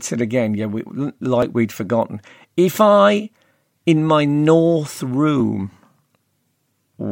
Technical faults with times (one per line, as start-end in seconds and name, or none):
1.42 dropped buffer (overrun)